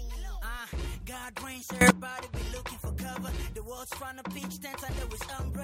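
At 1.81 s the level leaps by about 20 dB in a single step and holds there until 1.90 s, a burst of roughly 90 ms before it drops back just as abruptly. This sudden gain jump lifts the sound and its background noise together, so the whole signal briefly blares. The likely cause is a digital gain change applied without a ramp. On a waveform the envelope forms a sharp-edged block; a spectrogram shows a uniformly brightened vertical band.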